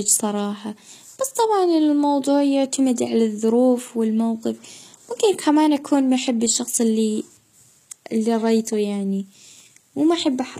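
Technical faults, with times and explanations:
Throughout, likely HE-AAC compression: treble is present but rebuilt from copied lower bands, so s sounds turn gritty and lispy, unlike a dull lowpass.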